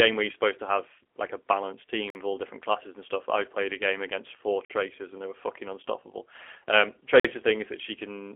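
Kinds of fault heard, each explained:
G.729 codec: The whole clip runs through the G.729 speech codec, in its lower-complexity G.729A form at 8 kbit/s. It rebuilds each 10 ms frame from a vocal tract filter, a pitch predictor and a few pulses, not from the waveform itself. The damage is plainly audible, with a rough, synthetic edge to the speech. The response is that of a 300 to 3400 Hz telephone line, and nothing above 3.8 kHz is present.
Gap between chunks: The audio was delivered in chunks of 2.5 s, and a stretch of silence sits at each join. No sound is lost, but the speech is interrupted. Three holes of about 48 ms each occur, at 2.10 s, 4.65 s and 7.20 s. Their regular spacing matches the chunk length plus the gap.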